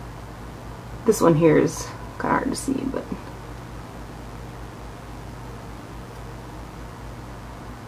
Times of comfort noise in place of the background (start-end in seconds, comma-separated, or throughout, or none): none